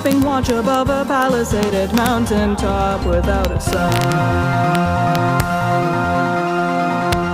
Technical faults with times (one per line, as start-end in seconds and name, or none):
0.06-0.74 integer overflow
1.22 integer overflow
1.63-2.07 integer overflow
3.45-4.12 integer overflow
4.75 integer overflow
5.15-5.40 integer overflow
7.13 integer overflow